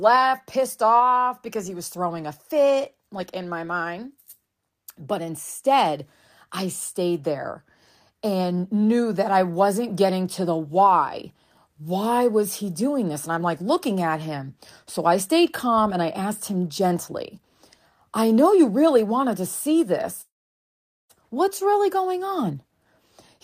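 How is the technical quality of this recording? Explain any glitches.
Two glitches affect the end of this speech recording. From 20.21 to 21.11 s, just after "really wanted to see", a call audio freeze appears. Delayed packets likely starved the jitter buffer, so a brief fading buzz gives way to about 0.82 s of silence, showing as a flat waveform and an empty spectrogram band. From 22.28 s, after "really going", a jitter buffer speed-up removes about 150 ms in small pitch-period cuts, so the speech runs 111% fast at unchanged pitch, with harmonics staying level on the spectrogram.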